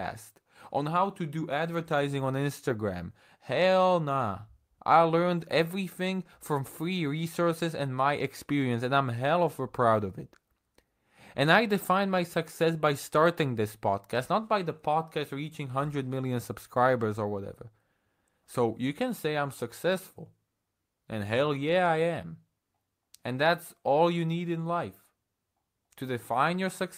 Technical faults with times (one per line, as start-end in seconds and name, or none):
none